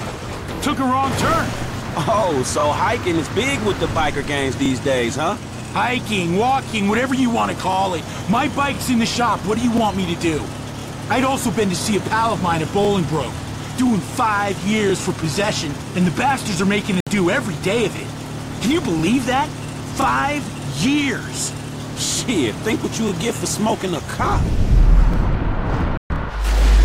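Sudden silent gaps cut the sound at 17.00 s for 64 ms and at 25.97 s for 128 ms, each resuming mid-stream, likely a Bluetooth dropout from late packets.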